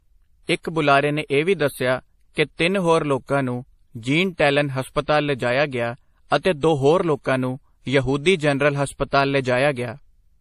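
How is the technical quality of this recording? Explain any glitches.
The quality is limited by stacked lossy coding across the whole speech recording. Transcoding between lossy codecs is the likely cause: an earlier low-rate MP3-like pass, then WMA re-encoding its artefacts. The result is the different codecs' artefacts heard together. A spectrogram shows a hard ceiling near 15.1 kHz throughout.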